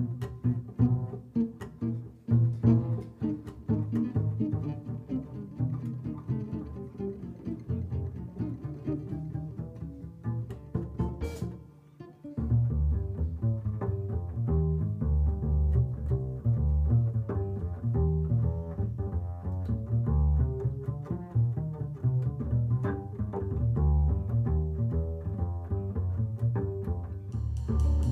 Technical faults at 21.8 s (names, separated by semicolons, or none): none